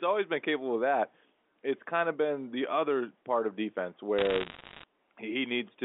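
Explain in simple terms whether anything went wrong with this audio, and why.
From 4.18 to 4.84 s, bit errors on a digital phone line scatter sharp ticks and crackle across the narrow telephone-band speech. A small share of bits got flipped, each spoiling one tiny sample, so unlike dropouts, the speech underneath never gaps or smears.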